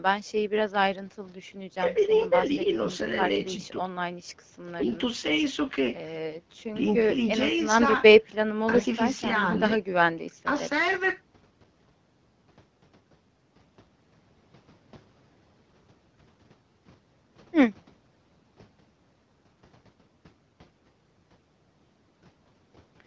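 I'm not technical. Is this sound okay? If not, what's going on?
Yes, this sound is okay, with nothing going wrong in it.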